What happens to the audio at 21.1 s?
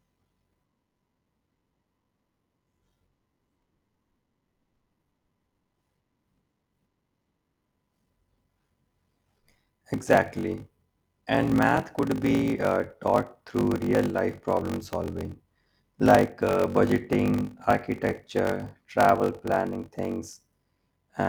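At 21.1 s there is a block size mismatch (padded), present throughout the speech. One stage writes shorter blocks than the next reads, which fits a 1024-sample read, and zeros fill each remainder. The gaps cause a 46.9 Hz buzz and slow the audio to 0.861 times speed, with timbre unchanged.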